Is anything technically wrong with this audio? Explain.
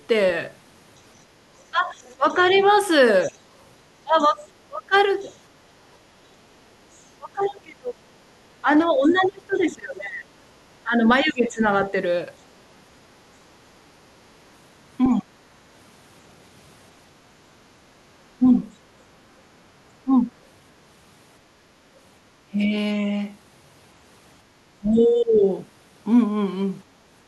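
Yes, there are two faults.

Other side's voice leaking through: from 1.6 to 11.33 s a second voice sits under the speech, roughly 20 dB quieter. The likely cause is the far end playing on a loudspeaker and the echo canceller leaving part of it in the microphone signal.

Speech suppressed in double talk: the speech dips and breaks up in pieces from 1.71 to 11.93 s (around 4 s in total, up to about 25 dB), briefly at 15.13 to 15.31 s (also about 25 dB), and from 18.38 to 25.44 s (around a second in total, about 15 dB). This is likely the echo canceller turning down everything while both sides talk, because it cannot tell the talker from the echo.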